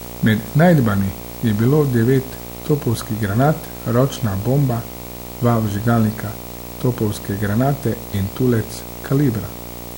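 Running the full length of the speech is video or display buzz, where a screen or video cable leaks its scanning signals into the audio path. The picture's field rate puts a buzz at 59.94 Hz, rough with harmonics and hash, sitting roughly 15 dB under the speech, and the line scan adds a whine at 15.7 kHz. A spectrogram shows evenly spaced harmonic stripes climbing from 59.94 Hz plus a steady thin line near 15.7 kHz.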